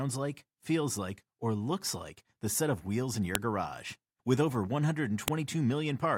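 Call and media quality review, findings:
Sharp snap in the speech at 3.35 s, then again at 5.28 s. Looks like file header played as audio: WAV pieces joined or streamed with their headers still attached, so those few dozen header bytes get decoded as samples. Hence the loud click right where each new piece kicks in, regardless of what the speech is doing. Probable component: the concatenation or streaming step. Worth stripping headers before joining.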